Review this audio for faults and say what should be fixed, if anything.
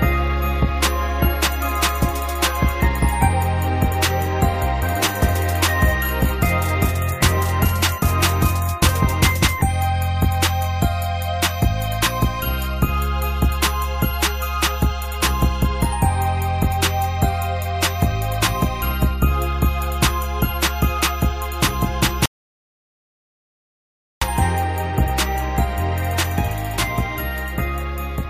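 A rebuffering stall runs from 22.26 s to 24.22 s: playback drained its downloaded audio, fell silent for about 1.96 s, then resumed exactly where it stopped, so nothing is missing but the timeline stretches. Prevent it with a larger playback buffer or adaptive bitrate that drops quality before the buffer empties.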